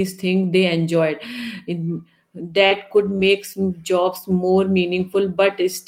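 From about 2.53 to 3.33 s, a run of lost packets rebuilt from error correction: fifteen 20 ms patches played from the low-bitrate backup copies, so the speech sounds rough and grainy. Inside that stretch, two short concealed packet losses at 2.67 to 2.73 s (about 40 ms missing) and 3.17 to 3.21 s, where the decoder stretched the previous sound, giving a brief smear.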